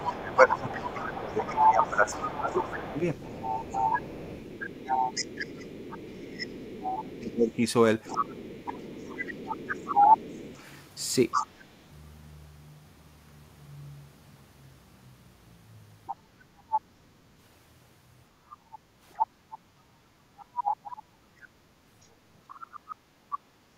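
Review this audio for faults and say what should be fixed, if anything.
A second voice runs under the speech from 0.0 to 11.47 s, again at 16.06–16.8 s and 18.51–20.93 s, at about 10 dB below the talker, and faintly at 22.49–23.38 s, about 15 dB down. This is the other side's voice leaking through, likely loudspeaker playback that the echo canceller left in the microphone signal. Better acoustic isolation between loudspeaker and microphone, or a headset, together with a longer or better-converged echo canceller filter, would prevent it.

The talker's speech sinks sharply, by roughly 20 dB at worst, from 0.1 to 2.95 s and from 6.19 to 7.6 s, overlapping the leaked voice. This is speech suppressed in double talk: with both sides active, the canceller likely treated the talker as echo and turned everything down. Tuning the double-talk detector so near-end speech keeps the suppressor in a lighter mode would prevent this.

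The room background dips by about 8 dB for around 0.7 s between 18.8 and 19.77 s, and by about 7 dB for around 0.3 s between 22.96 and 23.23 s, then comes back. This is background gated by the echo canceller, which clamps the microphone while the far end plays. Gentler residual-echo suppression with comfort noise filling the gaps would prevent the audible dips.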